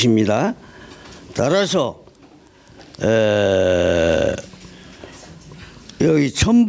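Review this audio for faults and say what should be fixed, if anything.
Gain pumping runs throughout: the gain ducks by around 10 dB under each loud sound. The likely cause is input gain set far too high, with a fast limiter clamping every peak. Lowering the microphone gain so the limiter rarely engages would prevent it. The call microphone processing's low-bass cut and lack of content above 8 kHz are expected.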